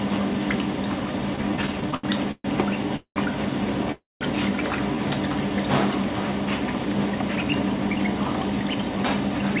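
Audio carried over a call path, band-limited with nothing above 4 kHz, which fits a G.711 A-law connection at 64 kbps, and affected by three kinds of delivery fault. From 1.36 to 2.46 s there are repeated stalls (stutter): thirteen short gaps, the longest 129 ms, where the receiver stretched the last sound while packets arrived late or too slowly and the jitter buffer kept running dry. About 323 ms is filled this way, roughly 29% of that stretch, so nothing is lost, but the audio drags and judders through it. Two call audio freezes follow. From 2.96 to 3.18 s the sound holds as a fading sound for 196 ms, including about 90 ms of silence. From 3.92 to 4.23 s a similar held, decaying sound lasts 289 ms with about 180 ms of silence. Each freeze is likely caused by packets held up in transit. When the playback resumes, it carries on where it stopped, so each freeze adds a gap and pushes the rest of the audio later without removing anything. 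From 6.72 s to 9.58 s a jitter buffer speed-up plays the audio about 10% fast at unchanged pitch. The receiver is trimming short pitch-period-length pieces over and over to drain excess buffered audio. Around 0.3 s is removed in total, and the passage sounds hurried.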